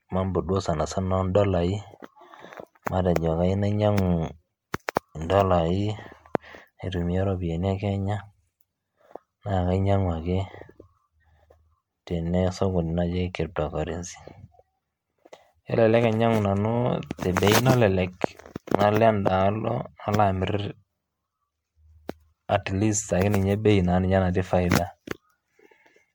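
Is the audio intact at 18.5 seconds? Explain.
No, at 18.5 seconds the speech carries generation loss through the whole clip: swirly, hollow and smeared with blurred onsets, likely from roughly ten MP3 re-encodes near 96 kbit/s, worse than one pass would sound.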